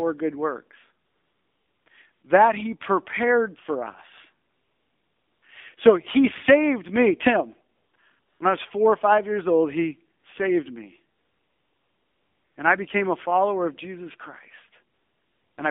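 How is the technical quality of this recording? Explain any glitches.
The recording is plainly degraded by narrowband mobile coding, with repeated bursts of synthetic noise in the pauses.

AMR narrowband mobile codec, throughout: the speech passes only about 150 Hz to 3.6 kHz and sounds buzzy and synthetic, which fits a low AMR-NB rate near 7.4 kbps. A spectrogram shows a hard ceiling near 3.6 kHz, with nothing above it.

AMR comfort noise, nine times between 1.06 s and 15.58 s: the pauses last from 20 ms to about 1.4 s. The longest pauses are 1.06–1.86 s after "good works", 4.48–5.42 s, and 11.18–12.56 s after "old he saved me". A shorter one, at 8.20–8.40 s, comes before "I was four or". In these gaps no speech frames arrive, so the receiver plays a smooth, flat noise that switches in and out abruptly. On a waveform and spectrogram these appear as uniform, featureless blocks with sharp edges.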